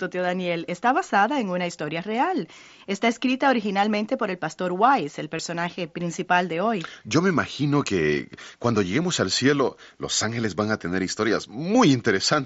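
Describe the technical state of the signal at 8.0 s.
At 8.0 s the audio is intact, with the speech carried through the Bluetooth mSBC headset codec as normal.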